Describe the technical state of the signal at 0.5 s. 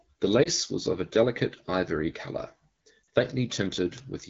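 At 0.5 s the speech is just coming out of a lost AMR speech frame, spanning 0.43 to 0.49 s. One 20 ms frame failed its checksum. The wideband decoder filled the gap by repeating the last good pitch and vocal tract settings at falling gain. The result is a brief dip or warble in level. The wideband band edge fits an HD Voice stream at about 12.65 kbit/s.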